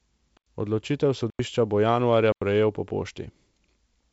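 At 0.37, 1.30 and 2.32 s, a block of digital silence about 93 ms long cuts the speech, which fits a 4096-sample buffer left unfilled. Each hole cuts out and back in with no fade, showing as a flat silent line in the waveform and a blank vertical stripe across the spectrogram, which is otherwise band-limited to about 7.7 kHz by the G.722 coding.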